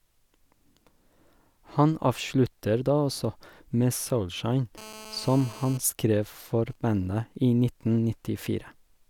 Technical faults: GSM phone buzz; GSM signalling bursts

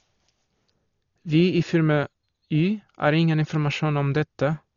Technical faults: Dolby Digital compression

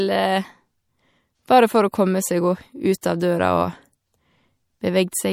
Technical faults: MP3 compression; pre-echo

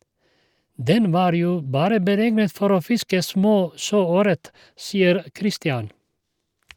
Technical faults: none

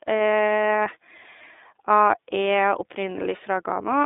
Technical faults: iLBC codec

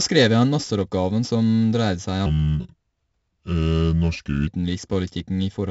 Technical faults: 4-bit ADPCM compression; section at the wrong speed

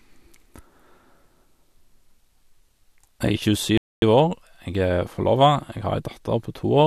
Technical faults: rebuffering stall

